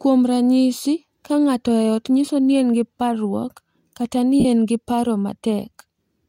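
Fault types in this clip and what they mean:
Lost LE Audio frames: Bluetooth LE Audio frames went missing, and the LC3 decoder filled each gap by replaying the last spectrum with random signs. The clip has two gaps. The first runs from 2.25 to 2.28 s, after "ka ng’ato e ot". It lasts 22.5 ms, which fits three lost frames. The second runs from 4.40 to 4.45 s, before "en gi paro". It lasts 45 ms, which fits six frames. Each one sounds like a brief noisy smear in the speech.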